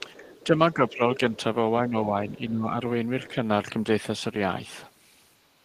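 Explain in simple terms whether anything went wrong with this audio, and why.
A couple of things went wrong, and they both point to the echo canceller likely struggling while both ends of the call talked at once.

First, speech suppressed in double talk: the talker's voice briefly dips at 0.00 to 0.06 s and 1.89 to 2.15 s, then more noticeably at 0.74 to 1.2 s and 2.32 to 2.75 s, where it gets clearly quieter. That's the canceller turning everything down when it can't tell the talker apart from the loudspeaker echo.

Second, the other side's voice leaking through: from the very start until about 0.44 s, a faint second voice can be heard underneath. It's quiet, but it's there because the canceller didn't fully scrub the loudspeaker sound out of the microphone.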